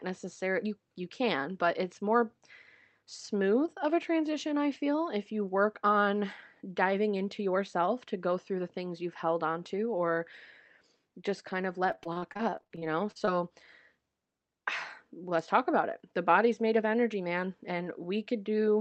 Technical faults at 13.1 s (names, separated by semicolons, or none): repeated packet loss (robotic sound)